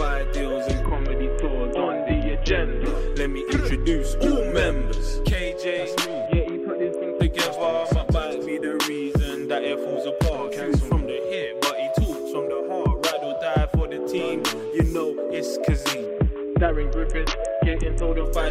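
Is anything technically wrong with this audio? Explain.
Yes. A Bluetooth SBC bit pool drop occurs at 0.83–2.86 s, 6.26–7.20 s and 16.06–18.25 s. The link starved the encoder of bits, consistent with a bit pool falling from 28 to about 6 (roughly 60 kbps), so upper sub-bands vanish: treble dulls and gritty quantisation noise rises.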